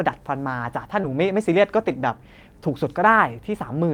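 A speech clip with two network faults close together. At 1.01 to 1.05 s there is short concealed packet loss. About 20 ms never arrived, and the receiver extended the previous sound, heard as a brief smear. Overlapping it, at 1.03 to 1.05 s, a lost packet is rebuilt from error correction. Its 20 ms comes from a rougher low-bitrate copy, which fits a single lost packet.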